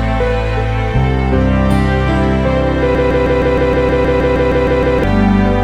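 At 2.95 s the audio catches on a fragment of about 157 ms and plays it back to back, exactly the same each time, roughly 13 times until 5.04 s, giving a stuttering, machine-like chatter. This is a broken-record loop, most likely from the player, encoder or stream stalling and resending the last chunk it held. Whatever should have been heard in those two seconds is gone, replaced by the repeated piece.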